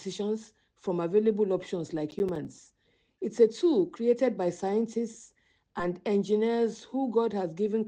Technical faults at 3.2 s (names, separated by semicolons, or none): none